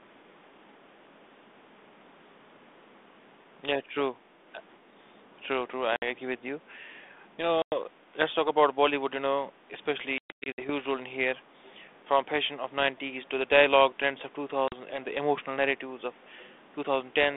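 Hard-edged silent gaps cut the speech at 5.96 s (60 ms), 7.62 s (100 ms) and 14.68 s (40 ms). From 10.18 to 10.70 s, 300 ms of dropouts are scattered over 400 ms, the longest run lasting 120 ms. After each hole the sound returns slightly distorted, then settles within tens of milliseconds. This is packet loss on an ADPCM call: lost packets were filled with silence, and the decoder's adaptive predictor and step size fell out of step with the sender's. The 32 kbit/s G.726 path carries the surviving audio.

At 11.64 to 11.72 s a faint, brief copy of the speech arrives 234 ms late, roughly 30 dB below it. This is an echo leak, likely from a far-end loudspeaker whose echo canceller let part of its microphone pickup travel back down the line.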